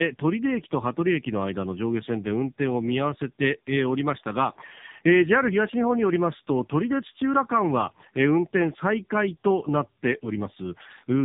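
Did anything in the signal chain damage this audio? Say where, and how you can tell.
Yes, at the codec stage: tandem speech coding across the whole clip. Nothing sounds above 3.7 kHz. The speech is rough, muffled and warbly, which fits two low-rate AMR-NB passes with a G.711 link between them. The second coder re-encodes the first coder's artefacts.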